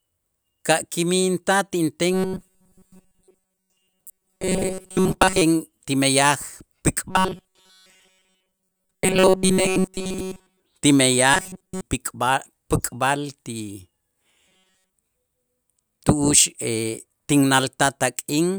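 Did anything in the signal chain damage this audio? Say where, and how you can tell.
Yes: robotic sound from repeated short buffers at 2.13–5.42, 7.10–10.62, 11.34–11.81 and 14.47–14.93 s. A rigid 188 Hz buzz shows as evenly spaced horizontal harmonic lines, likely from a buffer underrun looping 5.3 ms chunks.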